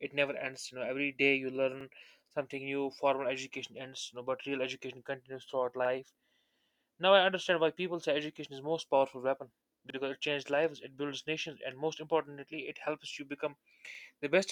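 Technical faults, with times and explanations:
1.81–1.86 s, 5.86–5.90 s, 9.90–9.95 s and 13.95–14.00 s, overlapping chunks: a brief stutter every 4 s, after "know every day you", "real education continues throughout" and "it helps you become", where each 4 s chunk restarts about 48 ms early, replaying that sliver.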